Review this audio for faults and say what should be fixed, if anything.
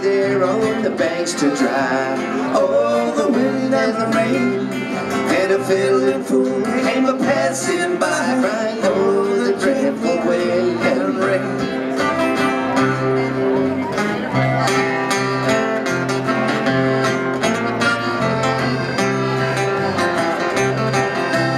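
Nothing needs to be fixed, as reviewing this audio turns up no faults.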